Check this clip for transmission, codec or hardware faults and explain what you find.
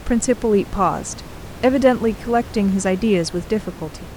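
No transmission, codec or hardware faults turn up anywhere in the speech. The only background is the room noise picked up by the microphone, sitting about 17 dB below the voice as part of the recording itself.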